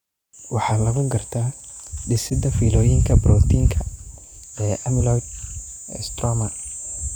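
At 0.68 to 0.73 s, just before "lagu gartaa", compressed frames are skipped: about 40 ms of speech is missing, and the audio jumps ahead. At 2.27 to 2.40 s, ahead of "fiilooyinka borotiinka", a corrupt frame is decoded across roughly three frames. The damaged data puts energy at the wrong frequencies, giving a chirpy noise burst peaking near about -15 dBFS. A second skip at 4.82 to 4.89 s drops another 40 ms or so. At 6.62 to 6.66 s, a single corrupt frame produces a brief blip at about -20 dBFS.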